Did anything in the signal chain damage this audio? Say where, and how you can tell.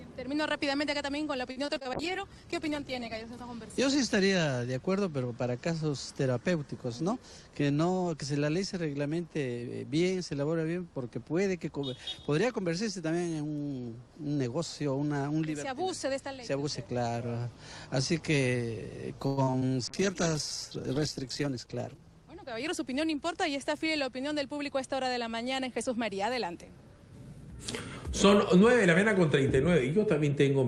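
Yes. At the network stage, repeated packet loss (robotic sound) appears at 1.51–1.87 s (five gaps, longest 46 ms, about a third concealed) and 19.27–19.63 s (four gaps, longest 102 ms, half concealed). The spectrogram shows frozen, repeated harmonic patches where lost audio was extended.

A call bitrate drop hits the codec at 1.94–3.32 s (48 to 12 kbps) and 19.88–24.51 s (48 to 11 kbps). Starved of bits, Opus codes coarsely and narrows its band. On a spectrogram, energy above 12 kHz disappears, then the band returns.

A jitter buffer speed-up occurs at 7.01–7.38 s (110% speed, roughly 50 ms removed) and 21.35–22.23 s (111%, roughly 100 ms). The receiver trimmed excess delay by deleting pitch-period-sized pieces. The waveform looks compressed in time, yet the pitch spacing stays unchanged.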